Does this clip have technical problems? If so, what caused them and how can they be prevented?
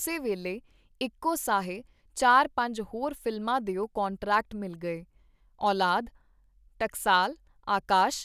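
No, nothing in this recording stands out as a technical problem, so there's nothing here that needs preventing.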